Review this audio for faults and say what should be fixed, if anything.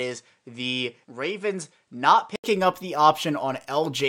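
From the start to 2.44 s the speech sounds dull and boxy, with nothing above 10.4 kHz, a level about 5 dB lower and a faint added noise floor roughly 50 dB down. An 80 ms silence follows, and the full, brighter sound returns at "up the". That pattern most likely comes from an input switched to a poorer device, with the first stretch captured by a narrower-band device before the better one took over. Fixing the input device before recording starts would prevent it.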